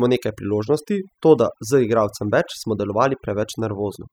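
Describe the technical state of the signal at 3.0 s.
At 3.0 s the speech carries overdone noise removal, present throughout the clip. A too-aggressive noise reducer drops frequency bands near its noise estimate, taking quiet voice detail with them. The background drops and breaks up into twinkling specks. A spectrogram shows scattered isolated dots in a blank floor and gaps in the voice's fainter bands.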